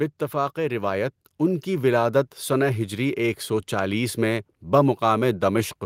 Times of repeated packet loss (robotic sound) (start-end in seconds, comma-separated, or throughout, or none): none